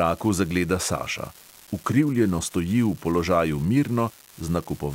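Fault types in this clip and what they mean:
Unreliable data bit: a marginal data line flips one bit at random, adding equal spikes of about -28 dBFS, heard as constant crackle continuing through pauses in the speech.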